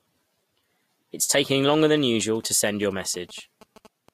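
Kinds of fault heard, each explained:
GSM signalling bursts: from about 1.51 s through 4.09 s the speech picks up that galloping dit-dit-dit of short buzzes, pulsing at roughly 217 Hz. A nearby 2G phone is only signalling, firing off short clumps of radio bursts, and some stage in the audio path is rectifying them into sound. It sits well under the speech, around 25 dB down.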